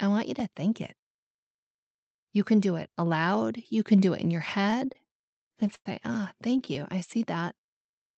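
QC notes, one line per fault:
4.62–5.86 s, repeated stalls (stutter): right after "do it in your", thirteen stalls break up the sound. Packets arrived late, so the jitter buffer kept running dry and the receiver stretched the last sound, faded during the longest 100 ms wait, to cover about 250 ms, roughly a fifth of the span. Nothing is lost, but the sound drags and stammers.
6.50–6.99 s, repeated stalls (stutter): five more brief underruns, none longer than 15 ms, each bridged by continuing the preceding sound. About 58 ms of filler makes up around 12 percent of this stretch.
7.54–8.16 s, jitter buffer slow-down: with its reserve low or its target delay just raised, the buffer rebuilt delay by repeating single pitch periods and pause fragments, adding 37 ms. The sound plays at about 95 percent speed with unchanged pitch, slightly drawn out, within the call codec's band limit near 8 kHz.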